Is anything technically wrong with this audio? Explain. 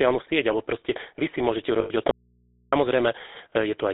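Yes, there are three problems.

Throughout, the speech carries the buzzy, gravelly roughness of the GSM full-rate codec, consistent with its 13 kbps rate. That codec models the vocal tract and drives it with a coarse, regularly spaced pulse excitation, discarding much of the fine detail. The line is band-limited to roughly 250 Hz to 3.7 kHz. On a spectrogram, energy stops sharply at 3.7 kHz with almost nothing below 250 Hz, and harmonics look smeared and grainy.

From 1.80 to 1.91 s, right after "proste vy si môžete", there are lost GSM frames. About 100 ms went missing, which fits five 20 ms frames. The decoder kept reusing the last good frame's settings, so the sound freezes into a rough, metallic ring. A spectrogram shows a static, repeated spectral pattern across that span instead of evolving formants.

From 2.11 to 2.72 s, about 610 ms, there is an audio dropout to a faint residue. 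The speech cuts off abruptly and returns just as suddenly. The gap holds only mains hum, far below the speech at about 40 dB down. The likely cause is a break in the signal upstream while the input after it stayed live, picking up hum. The waveform shows a sudden collapse to a thin, steady trace. On the spectrogram, only low horizontal hum lines remain.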